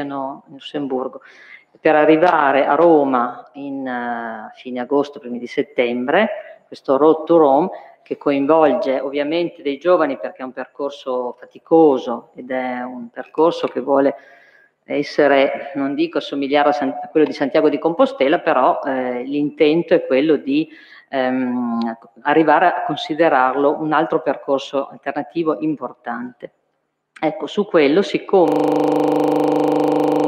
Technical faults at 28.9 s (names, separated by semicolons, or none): system hang loop